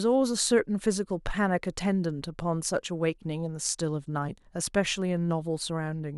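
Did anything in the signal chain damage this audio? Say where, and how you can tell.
No, nothing in the chain audibly damaged this speech recording; no stage left any trace I can hear.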